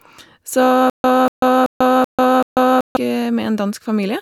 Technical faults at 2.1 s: stutter with silent gaps

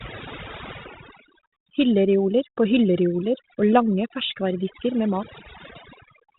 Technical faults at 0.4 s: overdone noise removal

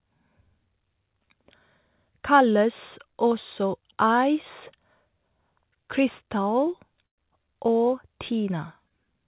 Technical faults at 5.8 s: none

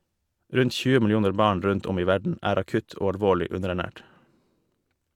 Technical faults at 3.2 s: none

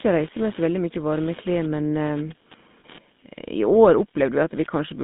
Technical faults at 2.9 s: computer activity noise; GSM full-rate codec; lost GSM frames

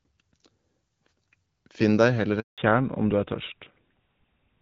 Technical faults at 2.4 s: handover gap

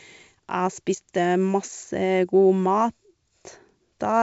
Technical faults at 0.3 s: none

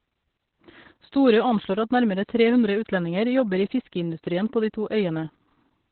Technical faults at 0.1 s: Opus voice compression

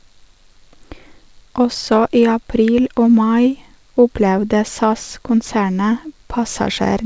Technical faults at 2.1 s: none

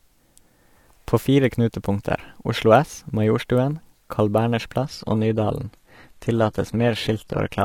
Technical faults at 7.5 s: adaptive stream at a lower bitrate

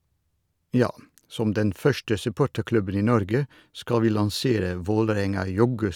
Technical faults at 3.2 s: none

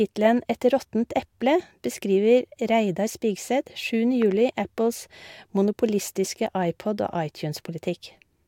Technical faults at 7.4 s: none

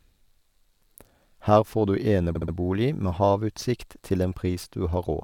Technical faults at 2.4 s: repeated frames

